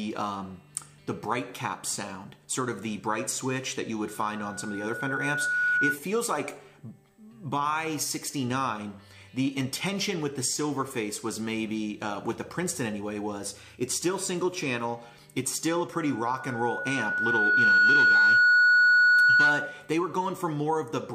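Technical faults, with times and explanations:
4.07–5.99 s and 15.93–19.91 s, loudspeaker feedback squeal: a single tone near 1.5 kHz swells over roughly one and a half seconds, then about two seconds, and peaks around 5 dB and then 10 dB above the sound. The microphone picks up its own loudspeaker, and at that frequency the loop gain exceeds one, so the tone feeds itself. On a spectrogram it appears as a brightening horizontal line at 1.5 kHz, and on the waveform as a rising envelope.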